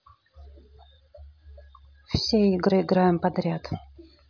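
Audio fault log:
Nothing to log here, as no faults turn up anywhere in this bit of speech.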